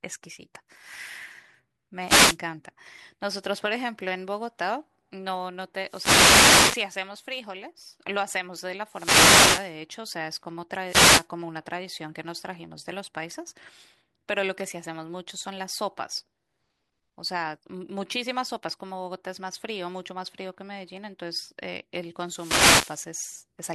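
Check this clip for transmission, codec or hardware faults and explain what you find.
Five wireless microphone noise hits interrupt the speech, at 2.05–2.38 s, 5.83–6.91 s, 8.87–9.76 s, 10.86–11.27 s and 22.19–23.13 s. In each, the radio link from an analogue FM microphone dips as reflected signals cancel the direct one, so the receiver's own hiss rises and masks the voice. Each is heard as a brief swish of static. A spectrogram shows broadband noise bands across these spans, and the waveform shows a raised noise floor.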